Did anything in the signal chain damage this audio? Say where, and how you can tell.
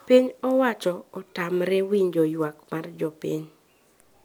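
No, nothing in the chain seems to have left a mark on this speech recording, so there's no damage to point to anywhere along the way.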